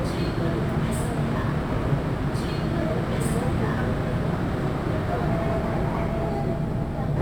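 Throughout the clip, a crude rate conversion has raised the sample rate by repeating the nearest existing sample instead of filtering and resampling properly. The error pattern fits a 44.1 kHz to 48 kHz step. The duplicated samples leave a regular distortion around 30 dB below the sound itself. That distortion forms tones unrelated to the audio, heard as a gritty, inharmonic fizz that rides on louder and brighter moments.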